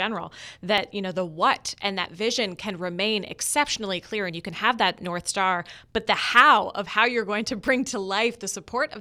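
This is a speech clip with five quick jump glitches at 0.78, 2.05 (between "know the what and" and "vision can remain"), 3.47 (right after "vision can remain"), 4.30 (just before "you can have that") and 7.68 s. There's no gap, just a skip forward of roughly 10 to 20 ms each time. That's most likely a dropped buffer (overrun), where the capture side fell behind and the hardware overwrote a chunk before it was read.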